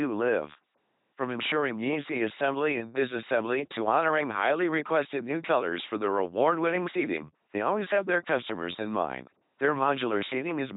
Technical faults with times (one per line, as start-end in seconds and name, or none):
0.00-10.76 LPC-10 vocoder